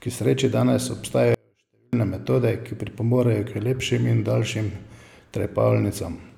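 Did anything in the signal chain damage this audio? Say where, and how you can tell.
Yes. A likely intermittent connection in the analogue wiring caused an audio dropout to a faint residue from 1.34 to 1.93 s, between "sreči danes" and "metode ki pripomorejo". For about 0.59 s only a faint leak remains, roughly 40 dB down, with abrupt edges unlike a natural pause.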